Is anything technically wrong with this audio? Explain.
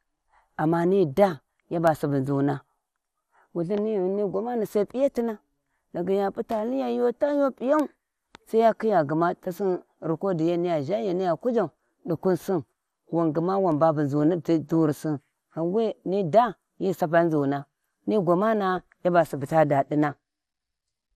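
Yes. Throughout the speech there is audible MP2 compression damage, likely from MPEG Layer II encoding at a low rate; the artefacts fit roughly 80 kbps. Layer II divides the spectrum into 32 sub-bands and shares out a limited bit budget, so upper bands get switched off and the remaining ones are coarsely quantised. Nothing survives above 15 kHz, giving a dull top end, and the flickering bands add a gurgling, granular roughness to the speech.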